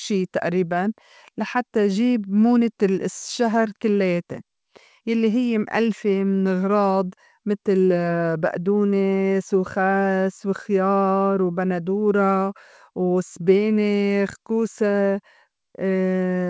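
Nothing here stands out as a fault, just speech coming over a call connection with the top end stopping at 8 kHz, which fits a wideband codec like G.722 running at 64 kbps.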